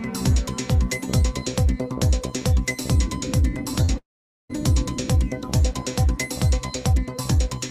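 At 3.85 s there is a brief smear lasting about 0.05 s. This is short concealed packet loss. Roughly 20 ms of audio arrived too late, and the receiver filled about 26 ms by continuing the last sound before blending back.

From 3.98 s to 4.51 s the sound stops. This is likely a long network dropout. A short fading continuation of the last sound gives way to about 0.46 s of silence. Around half a second never plays, and the audio resumes afterwards.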